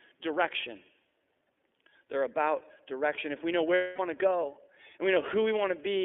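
The iLBC codec shapes the speech from start to finish. This narrowband VoIP coder passes only about 250 Hz to 3.5 kHz, so the top and bottom are cut and the speech sounds thin and telephone-like. It codes each frame's excitation independently, and the damage is plainly audible as a rough, slightly synthetic grain on the speech. The character fits a 13.33 kbps stream built from 30 ms frames.

Lost iLBC frames interrupt the speech from 3.74 to 4.00 s, a gap of about 240 ms, which fits eight consecutive 30 ms frames going missing. The decoder fills the hole by repeating the last pitch cycle mixed with noise, fading it as the loss continues. The result is a held, buzzy, breathy vowel-like sound in place of the real speech. Because each frame decodes without depending on its predecessor, the speech returns intact almost immediately after.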